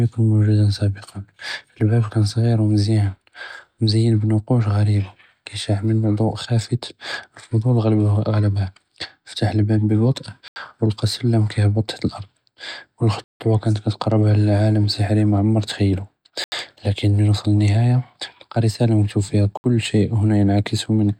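At 10.48, 13.24, 16.44 and 19.57 s the speech drops into blocks of digital silence lasting 80, 160, 80 and about 67 ms, where output samples arrived as zeros. Each gap cuts in and out with no fade. The waveform shows flat lines, and the spectrogram shows blank columns with bright edges.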